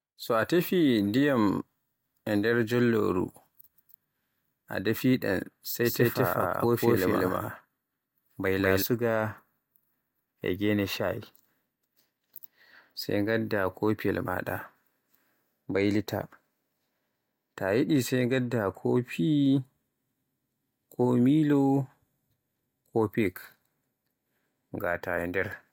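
From 5.84 s to 8.82 s the speech suddenly gains a second, equally loud copy trailing around a fifth of a second behind, so every syllable is smeared into a clattering double. The echo carries the full frequency range with no decay or room colour, and it cuts in and out abruptly at both ends. This doubled audio track likely comes from the same signal being captured again through a slower path, or an edit leaving two offset copies overlapping.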